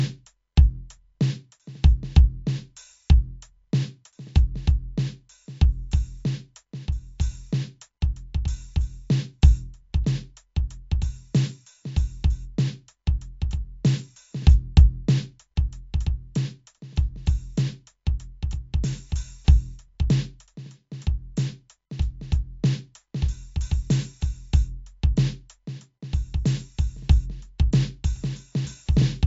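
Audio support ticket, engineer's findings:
Music, full duration: treble cut hard at 7.6 kHz, dull top end. Swirly, watery texture and metallic chirps, smeared attacks, plainly audible. Likely MP3 compression at a low bitrate, around 57 kbps. Encoder starved of bits drops the band above the cut-off and zeroes weak frequency lines, which flicker frame to frame.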